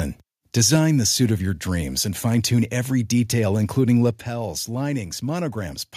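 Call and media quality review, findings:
Microphone overload, 0.57 to 0.75 s: harsh, crackling edge on the loudest syllables, peaks flattened about 2 dB past full scale on under one percent of samples. Likely input gain set too high, driving the converter into its ceiling.

Microphone volume stepped down, 0.76 s and 4.11 s: abrupt level drops of about 3 dB, then about 6 dB, affecting speech and background together. The first follows directly after the clipped peak. Likely the call software's automatic gain control cutting device input level.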